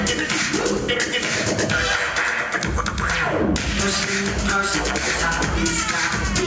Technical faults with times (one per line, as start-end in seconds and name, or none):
0.00-6.47 gain pumping